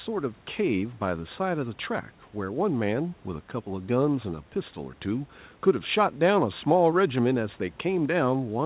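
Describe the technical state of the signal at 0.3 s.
At 0.3 s the speech signal is intact, with no dropout, distortion or glitch, only the faint room noise well below the speech and the narrowband character of the G.711 call path, which carries nothing above 4 kHz.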